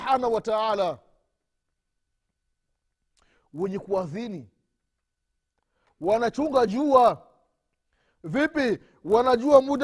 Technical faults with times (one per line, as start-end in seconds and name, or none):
0.00-9.83 resampler restarted on every block